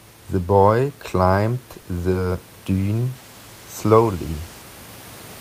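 At 1.73 to 1.77 s and again at 1.81 to 1.85 s, a short stall from a late packet holds the speech: the jitter buffer ran dry, the receiver stretched the last sound by about 20 ms, then resumed with nothing lost, leaving a slightly drawn-out, buzzy hitch.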